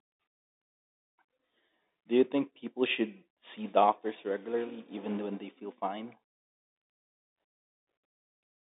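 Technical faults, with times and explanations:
No technical faults can be heard in the speech. It is carried by G.711 telephone coding, which holds the sound within the line band of 250 Hz to 3.7 kHz.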